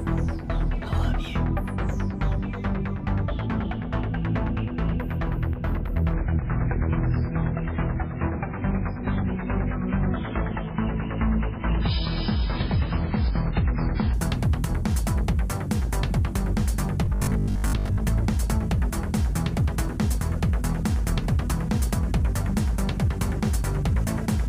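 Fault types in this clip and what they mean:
Adaptive stream at a lower bitrate: From 6.14 to 14.13 s the sound abruptly turns swirly as codec artefacts rise, then snaps back with no gap. The player switched to a much lower-bitrate version, which fits roughly 16 kbit/s MP3.
Robotic sound from repeated short buffers: From 17.05 to 18.01 s the sound becomes a rigid, metallic 50 Hz buzz. It is likely caused by late-arriving audio being filled by repeating 20 ms chunks, with about half the real audio skipped.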